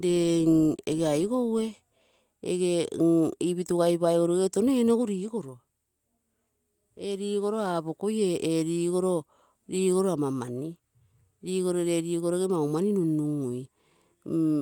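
No technical faults can be heard anywhere in the recording. Nothing in the audio points to a problem in how it was captured or carried.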